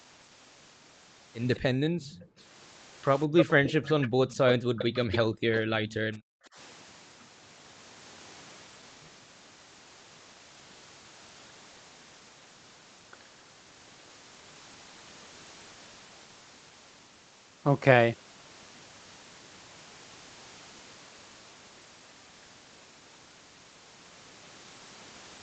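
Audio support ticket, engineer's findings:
Delayed copy of the speech at 1.55–2.27 s (about 30 dB down, 204 ms behind) and 3.37–5.94 s (about 10 dB down, 253 ms behind). Likely an echo leak from a far-end speakerphone canceller. A discrete repeat, not smeared reverb tail.

Background gated by the echo canceller: room sound dips by up to about 40 dB at 1.73–2.38 s, 4.08–4.69 s and 5.29–6.56 s, overlapping the echo. Suppression during loudspeaker playback.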